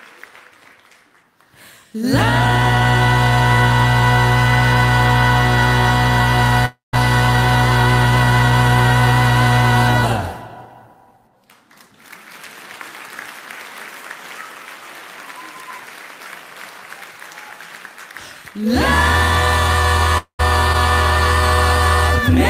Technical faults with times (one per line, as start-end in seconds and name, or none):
6.65-6.95 long network dropout
20.18-20.41 long network dropout